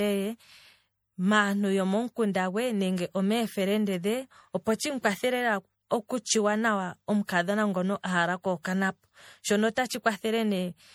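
Speech throughout has generation loss: swirly, hollow, smeared consonants, likely from about three rounds of MP3 encoding at around 64 kbit/s. A spectrogram shows patchy holes and speckled noise below the cutoff, and the waveform's sharp onsets look rounded.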